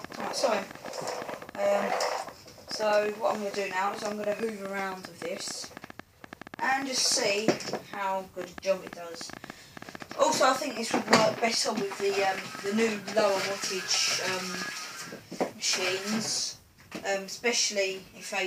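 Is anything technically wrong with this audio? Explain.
Yes. From 0.05 to 14.7 s, an uneven ticking of about 9 clicks per second rises well above the sound: a train of clicks, likely from electrical interference or a faulty connection or power supply.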